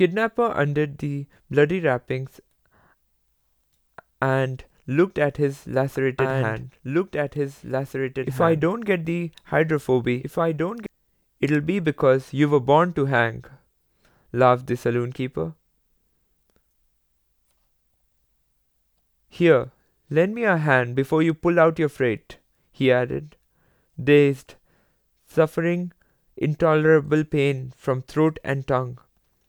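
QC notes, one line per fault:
5.94 to 10.86 s, doubled audio track: a second full-band copy of the speech runs about two seconds behind the original, around 5 dB quieter, so earlier phrases replay under later ones. The copy carries no decay or room colour, unlike an echo, and it switches on and off abruptly at the edges of this span. The likely cause is a slower capture path recording the same signal again, or an edit holding two out-of-step copies.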